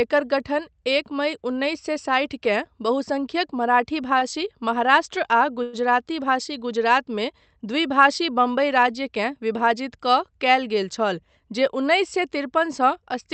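At 4.19 to 4.24 s there is a short stall from a late packet. A packet missed its slot, the jitter buffer ran dry, and the receiver stretched the preceding sound by 20 ms until the data arrived. Nothing is lost; the sound just lingers slightly too long with a faint buzzy quality. On a spectrogram, the harmonics run flat and smeared for that brief stretch. The waveform shows a short, repetitive, slightly weakened cycle.

From 5.63 to 5.76 s comes a call audio freeze, likely caused by packets held up in transit that emptied the buffer. The last sound is carried on for 104 ms as a fading, buzzy continuation rather than falling silent, and then the audio resumes exactly where it stopped. On the spectrogram this is a horizontally smeared band whose energy decays. The waveform shows a repeated pattern tapering in amplitude, with no true gap to zero.

Between 10.83 and 11.53 s a jitter buffer speed-up is audible. 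The buffer was holding surplus audio, so the receiver trimmed small pitch-period-sized pieces in quick succession, about a tenth of a second in total. Speech runs at roughly 111% speed with unchanged pitch and sounds noticeably hurried. Spectrogram harmonics keep their spacing while syllables are compressed in time, and the waveform shows tiny, closely spaced splices. Throughout, the call codec's band limit at 8 kHz is visible as an empty region above that line.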